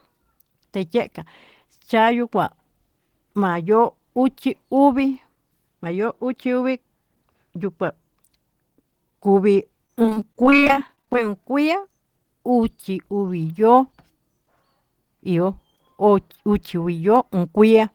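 From 9.86 to 11.15 s the speech turns choppy and robotic, with bits missing. This is repeated packet loss: a rapid run of short holes, none longer than 23 ms, each patched by repeating the preceding sound, concealing about a quarter of the stretch.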